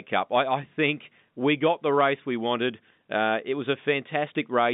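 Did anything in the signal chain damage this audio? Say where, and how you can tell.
No, nothing in the signal chain damaged this audio.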